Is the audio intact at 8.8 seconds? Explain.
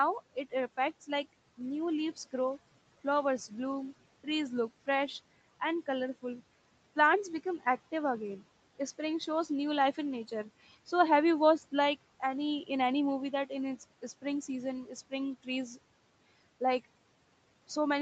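Yes, the speech at 8.8 seconds is intact, with no dropout, glitch or distortion at that moment.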